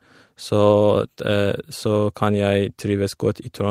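No faults can be heard anywhere in this speech recording.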